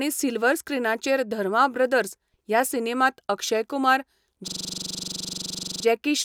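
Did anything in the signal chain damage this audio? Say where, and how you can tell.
Yes. The damage is at the driver or buffer stage: a system hang loop. From 4.48 s to 5.85 s the host stopped refilling the output ring buffer while the audio hardware kept replaying it. The same 42.7 ms slice of speech repeats 32 times, which fits a 2048-sample buffer. At 23.4 Hz that repetition comes across as a rapid machine-gun stutter that holds without change until playback resumes.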